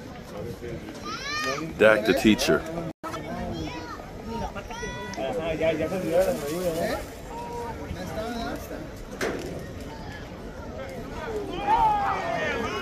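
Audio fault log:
2.91–3.04 s, playback stall: the sound stops dead for about 120 ms and then resumes, a clean silence rather than a crackle or a burst of noise. The likely cause is the player running out of buffered data or its output thread being held up. Unlike a dropout, where a slice of material is simply missing, the flow picks up again exactly where it halted, and the delay has to be made up afterwards.
3.04–3.16 s, catch-up at higher speed: immediately after the silence the audio runs at 2.0 times normal speed for 0.12 s, with pitch jumping by roughly ten semitones, so the material is briefly chipmunk-like and rushed. This is the player resampling its backlog to recover the lost time, then snapping back to normal rate. Unlike a steady pitch shift or a tape-speed fault, it is a short burst tied directly to the preceding stall.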